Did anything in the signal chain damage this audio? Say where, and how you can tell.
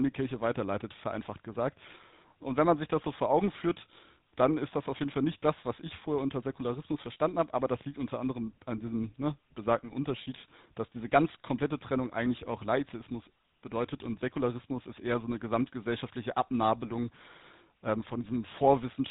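Yes, at the codec: GSM full-rate coding throughout leaves the speech buzzy and gravelly, nothing above 3.8 kHz, which fits its 13 kbps pulse-excited model.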